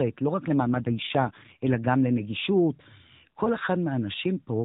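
From 0.59 to 1.78 s the speech turns rougher and more synthetic without losing any band or leaving a gap: an AMR rate drop, fitting a fall from 12.2 to 5.9 kbps on a weak link.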